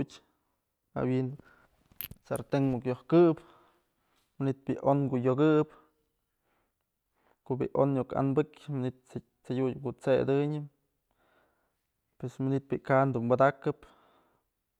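Listening to the speech recording, nothing stood out as a technical fault at any point.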